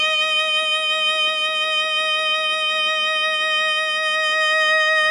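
A music clip, likely squeezed through HE-AAC compression at a very low bitrate, around 12 kbps, where the treble is rebuilt from copied lower bands rather than coded. Throughout, the top end sounds heavily damaged, gritty and metallic, with nothing above 11.5 kHz.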